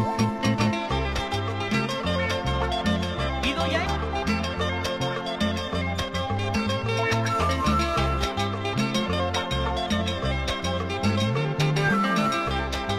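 Around 3.81 to 3.87 s the sound jumps abruptly ahead with a small blip, most likely a stream segment skipped, with the player dropping a failed chunk and carrying on.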